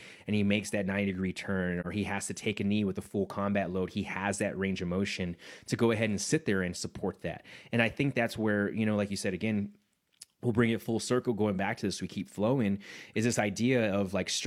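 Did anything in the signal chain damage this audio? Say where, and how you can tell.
Yes. At 1.80 s the speech drops into a brief soft-edged gap lasting until 1.86 s, a hole of about 43 ms that fades out and back in rather than cutting off sharply. This is AAC frame loss with muting at the codec stage. The decoder lost one frame's worth of data and replaced its spectrum with silence, and the overlapping transform windows on either side smear the edges into short fades, so the gap sounds soft-edged rather than abrupt.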